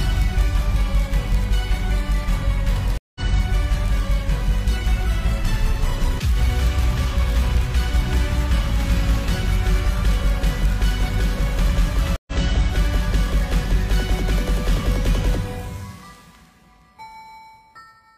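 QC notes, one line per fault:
2.98 to 3.21 s and 12.16 to 12.32 s, stream reconnect: the audio drops to silence for 176 ms and then 109 ms, and each time resumes about a tenth of a second further on, so a short stretch of material is skipped rather than paused. The connection broke, playback stalled, and the player rejoined the live stream with a fresh decoder. The restart comes in with a brief muted or faded onset.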